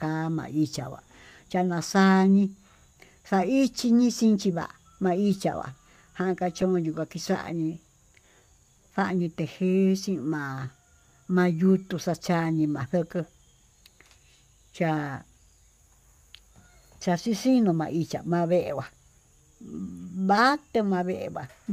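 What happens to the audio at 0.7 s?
Nothing goes wrong at 0.7 s; the speech there plays through intact, with no dropout, click or distortion at that point.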